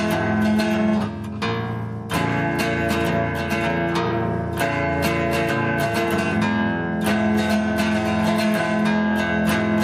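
No technical faults can be heard anywhere in the clip.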